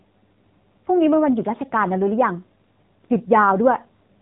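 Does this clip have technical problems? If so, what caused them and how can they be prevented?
Yes. Throughout the speech there is audible AMR narrowband mobile codec damage. Nothing above 4 kHz survives, which points to 8 kHz sampling, and the voice has a buzzy, synthetic quality consistent with a low mode of around 7.4 kbps. The codec models the vocal tract and excites it with a handful of pulses per 5 ms subframe, so at this bit budget the fine detail of the voice is replaced by a coarse approximation. To prevent it, capture or route the call over a wideband or higher-bitrate path instead of AMR-NB.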